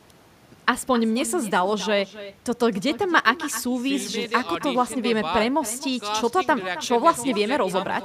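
Throughout the speech, echo with no canceller is present. The far end's loudspeaker feeds its microphone, returning a quieter, thinner copy about 16 dB down, roughly a third of a second late.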